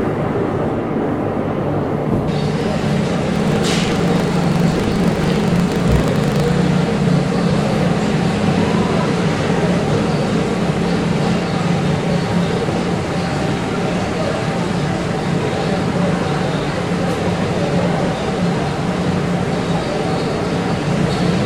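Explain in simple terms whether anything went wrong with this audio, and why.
From 3.32 to 6.54 s the sound picks up a mechanical, robotic rattle that repeats about 25 times a second and stops after that. This is buffer tearing. The audio passes through a looping buffer, and the part that writes sound into it and the part that plays it out have drifted out of step. In every 40 ms cycle, a small slice of sound from roughly 70 ms earlier is played with abrupt joins on either side, and those repeated jumps make the buzz.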